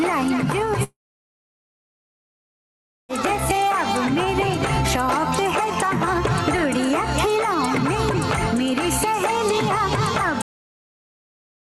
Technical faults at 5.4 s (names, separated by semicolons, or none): none